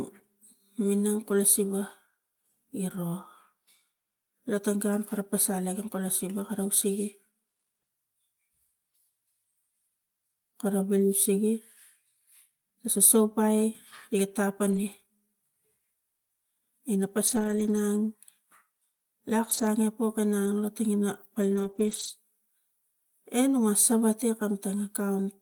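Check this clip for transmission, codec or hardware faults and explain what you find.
Packet loss is audible, concealed by error correction. Lost packets rebuilt from error correction at 14.67–14.77, 17.27–17.77, 19.45–19.63, 20.45–20.47 and 21.55–22.09 s: following packets carried low-bitrate copies, so the speech turns rough and noisy without gaps.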